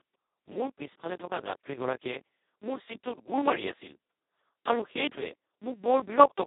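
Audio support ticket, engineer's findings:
Speech hoarse, buzzy and close to robotic for the whole clip. Band roughly 200 Hz to 3.7 kHz, nothing above 3.8 kHz. Speex codec at its lowest settings, which fits about 2 kbps, so the CELP excitation is starved and it turns nearly vocoder-like.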